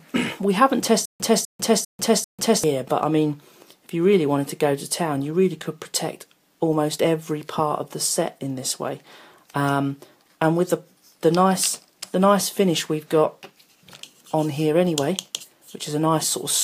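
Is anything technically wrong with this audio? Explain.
Yes. From 1.05 to 2.64 s there is a stutter with silent gaps: a 249 ms burst repeats four times, each followed by 147 ms of dead silence. This is likely a stalled stream replaying its last fragment, and the audio from that stretch is lost.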